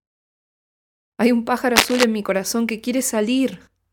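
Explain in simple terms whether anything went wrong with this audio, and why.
Cable scratch noise appears from 1.76 to 2.04 s: a rough, crackly rustle about as loud as the speech. It is likely from a worn cable or connector being moved, its patchy electrical contact briefly spraying bursts of noise into the signal, while the muted pauses are also audible as clean silences.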